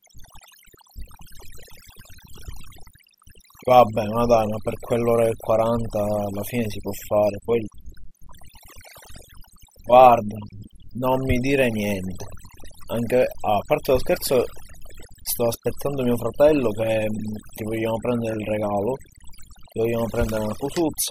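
From start to finish the speech shows overdone noise removal: a noise reducer set too aggressively cuts individual frequency bands whenever they sit close to its noise estimate, taking low-level speech detail along. Pauses drop to near silence with sparkling, chirpy residue.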